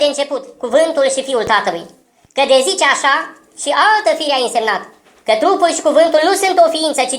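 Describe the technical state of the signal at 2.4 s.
At 2.4 s the audio is running fast and sharp, as it does for the whole clip: a wrong sample rate fault. The samples are played back at a higher rate than they were captured at, with no conversion, which fits material recorded at 32 kHz and played at 44.1 kHz. Everything runs about 1.38 times too quickly and sits about 5.55 semitones high. Speed and pitch rise together by the same ratio, which is what separates this from a pitch shift or a time-stretch, where one changes without the other.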